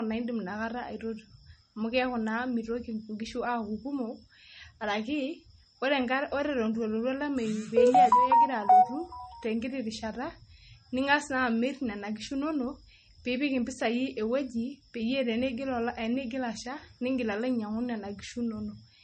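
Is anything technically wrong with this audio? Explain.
Yes. Throughout the speech, nothing is present above 8.4 kHz, and the dull, smeared compression texture of a heavily squeezed encode remains. This is likely low-bitrate audio saved at a high bitrate: an MP3 around 32 kbit/s re-encoded near 256 kbit/s. The larger file keeps the first encode's losses, unlike a genuine high-bitrate encode with full treble.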